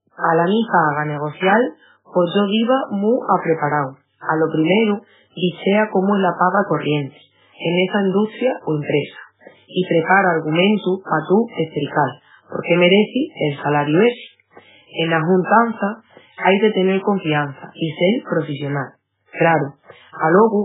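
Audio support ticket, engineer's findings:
Watery, swirling texture across the whole speech clip, start to end. Hard treble ceiling at about 3.8 kHz, nothing above. Likely MP3 compression at a very low bitrate, around 8 kbps. Encoder starved of bits: top band cut, weak spectral lines zeroed and flickering frame to frame. S sounds chirpy, onsets smeared. Not a plain low-pass or narrowband line: those lose treble cleanly, without the swirl. Not packet loss: damage constant, no gaps.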